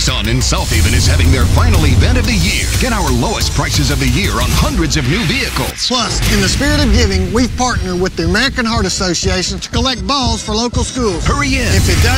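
No technical faults are audible.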